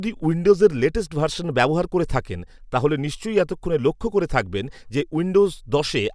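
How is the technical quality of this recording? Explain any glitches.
Listening closely to the whole recording, nothing technical stood out that would count as a glitch.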